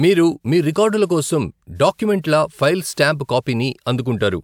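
No technical fault can be heard anywhere in the speech recording. There is nothing at any point that needs a timestamp or an explanation.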